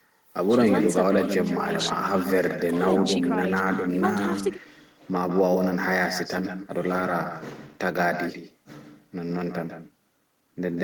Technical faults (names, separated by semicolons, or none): echo with no canceller